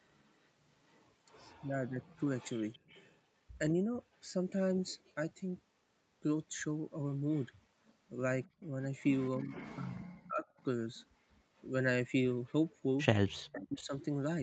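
Echo leak runs from 0.05 to 3.19 s: a faint copy of the speech trails about 232 ms behind, roughly 30 dB down. The far end's echo canceller likely failed to remove all of what its microphone caught from the loudspeaker, so part of it returned.

Speech suppressed in double talk follows at 1.61 to 2.24 s, where the voice dips by up to around 35 dB over about 0.7 s. With both sides talking, the canceller likely could not separate the talker from the echo and attenuated both.

Echo leak returns at 7.31 s and lasts to the end, now stronger at about 20 dB below the speech and delayed 266 ms. It likely has the same cause: loudspeaker pickup the canceller did not fully remove.

Speech suppressed in double talk recurs from 8.54 to 10.45 s, where about a second of the voice is pulled down by up to around 40 dB. It returns at 13.44 to 13.93 s with a similar drop. Overlapping talk likely drove the canceller to duck the near talker along with the echo.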